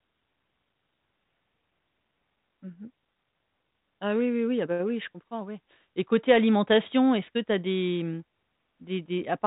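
No technical faults can be heard in this speech: the band stops at about 3.8 kHz, as expected of G.726 ADPCM telephone coding, and the at most faint coding hiss points to its 40 kbit/s rate.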